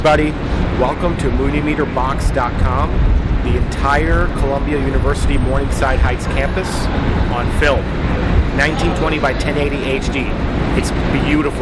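Regular ticks at 10 per second appear from 9.6 s to the end: the resampler was restarted on every block, so each 100 ms edge of the 48 kHz to 24 kHz conversion leaves a small error.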